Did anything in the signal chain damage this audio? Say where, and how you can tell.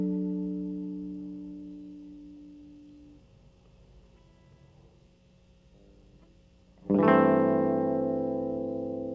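No, nothing in the signal chain damaged this music; it went through a G.722 call path at 64 kbps, which leaves nothing above 8 kHz.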